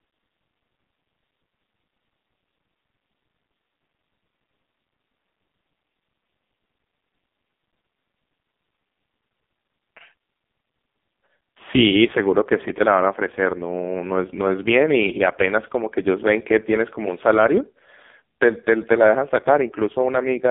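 From start to finish the speech sounds buzzy, thin and synthetic, boxed into a band of roughly 200 Hz to 3.6 kHz with nothing above 3.8 kHz. This is heavy AMR narrowband mobile codec damage, and the harsh buzz fits AMR-NB's lowest 4.75 kbps mode.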